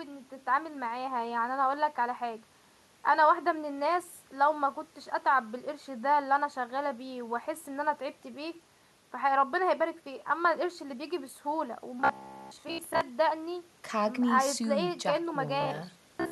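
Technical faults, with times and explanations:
12.01–13.01 s and 15.61–16.32 s, robotic sound from repeated short buffers: audio likely arrived too slowly, so playback kept looping a chunk of about 15 ms while most of the real signal was skipped. That loop imposes a rigid 66.8 Hz buzz, turning the voice metallic while it roughly tracks the speech.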